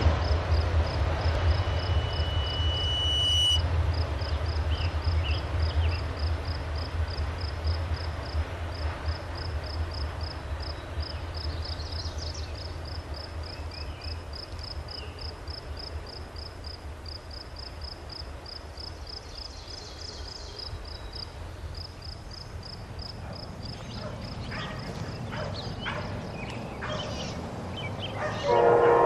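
A loudspeaker feedback squeal runs from 1.37 s to 3.67 s. It is a single tone at 3 kHz. It swells over roughly two seconds and ends up a few decibels louder than the rest of the sound. The cause is a microphone hearing the loudspeaker it feeds. At 3 kHz the loop gain rose above one, so that frequency fed itself and kept growing. The squeal stops at 3.67 s.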